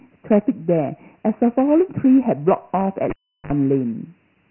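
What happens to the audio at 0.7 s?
At 0.7 s the speech carries Dialogic VOX ADPCM damage, present from the start of the clip to its end rather than at that moment alone. Each sample is coded as a 4-bit step from a prediction, and the hard 3 kHz ceiling points to a 6,000-sample-a-second rate, about 24 kbps. The coarse steps leave a gritty hiss riding on the speech. A spectrogram shows a flat cut-off at 3 kHz with noise filling the band beneath it.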